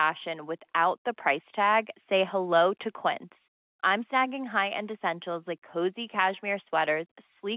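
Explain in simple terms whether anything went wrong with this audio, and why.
Nothing went wrong with this audio; it is simply speech carried over standard telephone coding, which is why it sounds a little narrow and thin.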